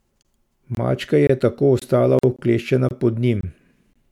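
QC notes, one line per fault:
0.23, 0.75, 1.27, 1.79, 2.36, 2.89, 3.41 and 3.93 s: gap between chunks. Each is a hole of about 23 ms, recurring after every 0.5 s of sound. The 1.27 s gap falls just before "tako ostala", the 1.79 s gap just after "je tako". Silence is left at each chunk boundary, interrupting the sound, but no sound is lost.
2.19–2.23 s: gap at a join of encoded pieces. A 46 ms silence opens right after "je tako ostala", with smeared edges. Separately encoded pieces were joined untrimmed, so encoder start delay and last-frame padding remain. The sound resumes where it stopped.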